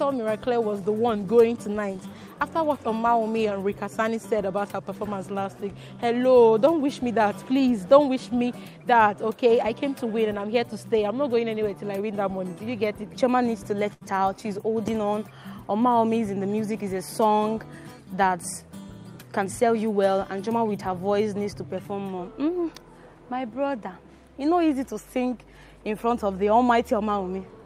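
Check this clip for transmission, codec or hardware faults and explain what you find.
One transmission fault is audible, a burst of packet loss at 13.93 to 14.03 s. The sound there turns into a smeared, fading continuation of itself for about 76 ms, then jumps ahead, so roughly 80 ms of audio is missing. Consecutive packets arrived too late or never, and the receiver stretched and attenuated the last good audio to cover the gap.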